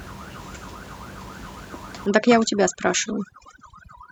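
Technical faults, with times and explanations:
2.06–4.12 s, overdone noise removal: the room noise, about 17 dB below the speech before this, drops and breaks up into twinkling specks, and quiet parts of the speech go with it as bands near the noise estimate are cut. Unlike a gate, this flickers band by band within the speech.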